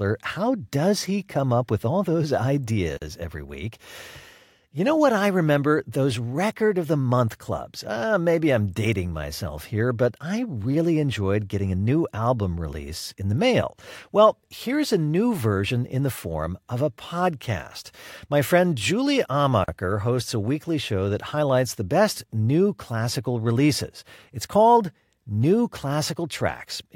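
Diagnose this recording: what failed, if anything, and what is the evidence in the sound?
A gap at a join of encoded pieces opens in the speech twice, at 2.97 to 3.02 s (44 ms) and at 19.64 to 19.68 s (40 ms). The fault lies at the codec stage. The audio was encoded as separate segments and spliced without trimming, so each segment's encoder start-up delay and final-frame padding survive as brief silences. Each dropout has smeared edges, and the speech resumes exactly where it stopped, with nothing missing.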